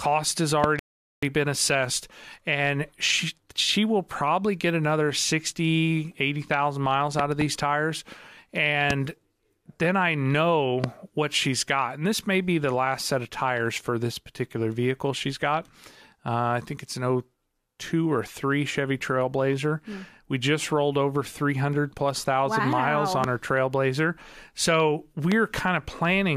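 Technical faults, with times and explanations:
0.64–0.66, 7.19–7.44 (a double), 8.90–8.93, 10.84–10.86, 23.24–23.26 and 25.32–25.34 s: loud pop. Sharp thumps about 15 dB above the speech, likely from a switch, static or driver glitch, with speech continuing beneath. The waveform shows tall narrow spikes, and the spectrogram shows full-band vertical lines.
0.79–1.23 s: rebuffering stall. Playback halts for about 435 ms as the player waits for data, then resumes exactly where it stopped, adding time without losing any audio. The waveform shows a flat gap, and the spectrogram shows a blank column across all frequencies.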